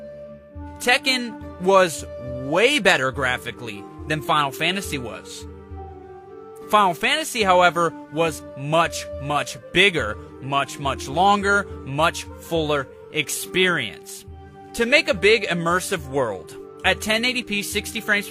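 Nothing in this audio stands out as a technical fault; there are no glitches, dropouts or odd artefacts anywhere in it.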